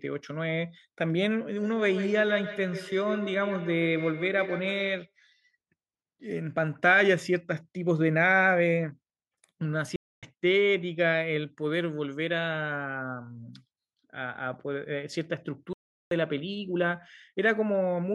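From 1.57 to 5.13 s there's feedback echo between two devices: a second device replays this audio into the mic, so each sound comes back roughly every 150 ms, thin and ringing, peaking at about 11 dB under the speech. Then the sound cuts out mid-flow at 9.96–10.23 s (267 ms) and 15.73–16.11 s (380 ms), a playback stall, likely the player running dry or getting blocked.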